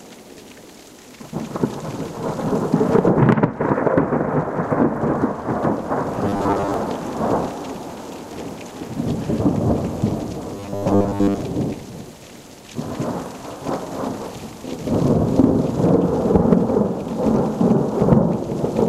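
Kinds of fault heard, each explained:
Robotic sound from repeated short buffers: Twice the sound turns into a rigid, metallic buzz, from 6.25 to 6.74 s and from 10.55 to 11.41 s. The buzz sits at a fixed 100 Hz, which fits one short 10 ms stretch being played over and over. The likely cause is audio arriving too seldom, so the player loops its last fragment. About half of the first passage is repeated material, and most of the second.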